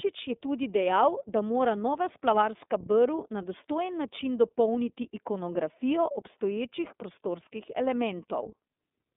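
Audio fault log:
throughout, iLBC codec: the speech is narrowband, slightly rough and synthetic, with plainly audible coding damage from excitation coded separately per frame, which fits iLBC's 30 ms, 13.33 kbps mode. A spectrogram shows energy confined to 200 Hz to 3.6 kHz, with nothing above 3.7 kHz.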